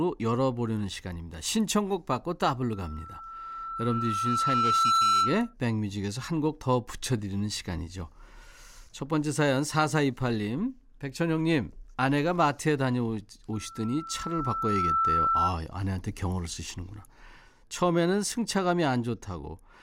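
At 2.73 s a loudspeaker feedback squeal rises under the speech, a single tone near 1.3 kHz that swells over about two seconds until it sits a little above the voice, stopping at 5.54 s. It returns from 13.53 to 15.54 s at the same pitch, building faster. The microphone was hearing its own loudspeaker, and the loop gain exceeded one at that frequency. Unlike a steady interference whine, it grows from nothing rather than starting at full level.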